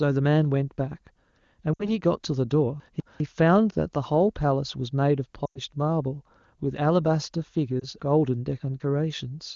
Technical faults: lost AMR speech frames; chunks out of order

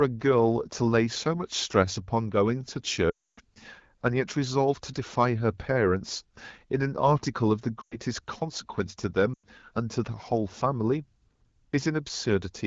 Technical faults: lost AMR speech frames

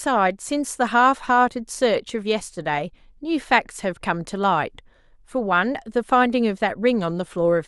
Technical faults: none

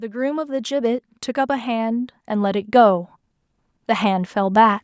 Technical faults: automatic gain rising

